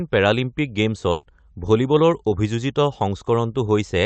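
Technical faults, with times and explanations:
1.11 to 1.25 s, burst of packet loss: several consecutive packets in the call stream arrived too late or not at all, so the decoder lost about 120 ms of audio in one stretch. The receiver extended the last sound it had and faded it down across the gap. The result is a held, dimming smear in place of real speech, after which the audio picks up further along with the intervening stretch gone. The call runs through an Opus call path, with its band topping out near 8 kHz.
2.29 to 2.33 s, short concealed packet loss: a single brief loss, about 20 ms, left a hole the decoder had to fill before the real stream returned. It continued the preceding sound, carrying its pitch forward if voiced or generating shaped noise if not, then crossfaded into the incoming audio. The repair is short enough to pass as a momentary smear or wobble.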